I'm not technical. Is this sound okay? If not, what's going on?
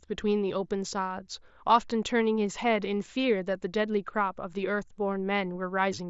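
Yes, nothing stood out on listening to this speech recording.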